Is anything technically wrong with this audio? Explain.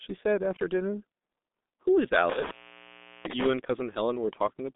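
Yes, two faults stand out. Throughout, the G.723.1 codec is audible: this low-rate telephony coder squeezes the speech to about 6.3 kbit/s in 30 ms frames, keeps only a line band of roughly 200 Hz to 3.7 kHz, and passes nothing above 3.8 kHz. Its slowly updated voice model smears fast changes, so damage here is heavy. The speech sounds muffled and hoarse, and consonants blur into one another.

An intermittent contact then disturbs the audio between 2.29 and 3.47 s, where a loose connection opens and closes. The line is open for about 0.74 s in total within that span, so the sound drops out or breaks up. The breaks bring crackle at their edges, and while the circuit is open only a faint hiss remains in place of the speech.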